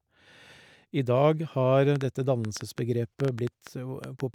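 A speech clip with a train of clicks from 1.96 to 4.21 s: about fifteen uneven ticks, roughly 5.8 per second, poking about 10 dB above the voice, likely interference or a faulty connection.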